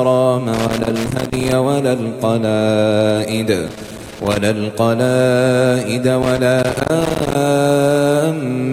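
Loose connector crackle breaks through three times, from 0.54 to 1.52 s, 3.68 to 4.37 s and 6.22 to 7.35 s. A worn or dirty contact keeps making and breaking, chopping the signal into irregular scratchy bursts, unlike the steady hiss of noise or the regular clicks of a digital dropout.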